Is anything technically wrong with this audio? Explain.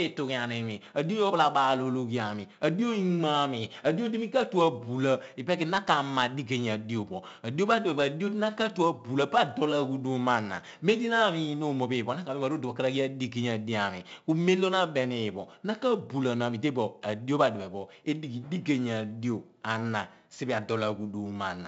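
Yes, the whole clip carries 4-bit ADPCM compression. Each sample is squeezed into a small predicted step, so a gritty, level-following hiss rides on the louder speech and sharp onsets smear. Nothing above 7.7 kHz survives, which fits roughly 64 kbps at a 16 kHz rate.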